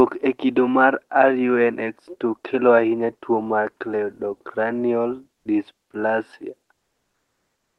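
At 5.37 to 5.45 s, just after "ahinya tuo mar cleidocranial", the background in the brief pause drops by about 23 dB into a flat, featureless hiss. From 6.73 s to the end, after "tuo mar cleidocranial dysplasia", the room tone again gives way to smooth, steady noise about 3 dB quieter. This is comfort noise in place of the background, likely from Opus DTX: the sender stops sending during the silences, and the receiver fills the gaps with synthetic noise.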